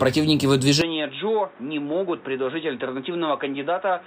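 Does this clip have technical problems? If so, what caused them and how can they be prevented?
Yes. At about 0.82 s the sound suddenly goes dull and boxy and stays that way to the end, with no gap at the changeover. The top end is cut off above 3.8 kHz, the level drops by roughly 10 dB, and a new background hiss sits somewhere around 30 dB under the signal. That's likely the input switched to a poorer device, a narrower-band mic or headset profile. To prevent it, lock the input device before recording.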